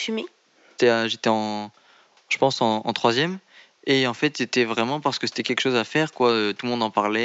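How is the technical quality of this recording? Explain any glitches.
The recording shows no technical glitches, and the only thing under the speech is a faint room noise sitting about 39 dB below it.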